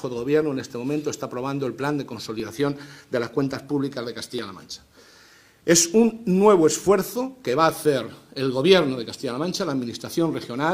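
Overlap between stream segments: adjacent 2-second segments carry overlapping time stamps, so the player trims sound that was never duplicated. At 2.40 s about 37 ms disappears, and at 4.39 s about 25 ms, each leaving a waveform jump heard as a brief click or skip.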